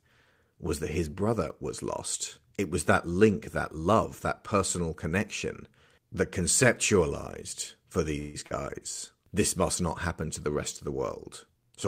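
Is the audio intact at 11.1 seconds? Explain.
Yes, the audio is intact at 11.1 seconds, with no dropout, glitch or other fault audible at that moment.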